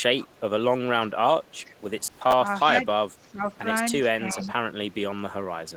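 A faint echo leak appears at 0.18–0.4 s and 1.44–1.75 s: a copy of the speech returning about 0.35 s late, some 25–30 dB down, likely from a loudspeaker echo the far-end canceller missed. The fixed delay sets it apart from room reverb. At 2.07–2.33 s, processor overload crackle tears through as gritty replays of stale fragments, which fits roughly 10 ms buffers missed about ten times. It stops once the load passes, unlike steady noise. Echo returns at 2.61–2.77 s. Overlapping it at 2.69–2.86 s, then at 3.17–3.44 s and 4.22–4.39 s, is speech suppressed in double talk: the voice dips by about 5 to 15 dB, likely because the canceller ducked both talkers together. These are level dips with no added copy, which separates them from the echo. A final echo leak, about 20 dB down, follows at 4.39–4.48 s.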